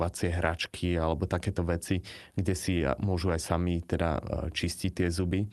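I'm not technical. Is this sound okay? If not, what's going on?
No. The speech has small, uneven hiccups and a slightly restless pace, as if tiny slivers of sound keep going missing. This runs from about 0.24 s to 5.35 s, nearly the whole clip.

The underlying fault is clock drift between sender and receiver. Every device keeps time with its own internal clock, and here the sending side's clock runs fast, by roughly 5 percent. So the sound arrives a little quicker than the receiving side plays it out, and the waiting area that holds incoming audio keeps filling up.

Those hiccups are the repeated timing corrections. To stop that backlog growing, the receiver keeps snipping out short pieces of sound so it can catch up, in effect playing the material at about 105 percent of its proper pace. Each cut is small, but they come at irregular moments rather than on a steady beat, which is why the speech seems to stumble now and then instead of simply sounding faster.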